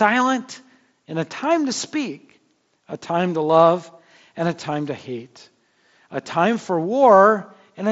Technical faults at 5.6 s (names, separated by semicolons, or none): none